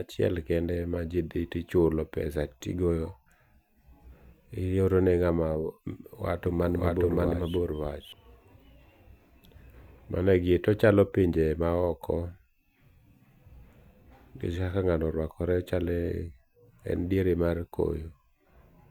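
From 6.46 s to 8.12 s the speech carries a doubled audio track: a second, full-band copy trails by about half a second at roughly equal level, likely from a slower capture path mixed back in. It sounds like an abrupt, dry echo with no room tail. A spectrogram shows the same pattern repeated half a second later, with hard start and stop edges.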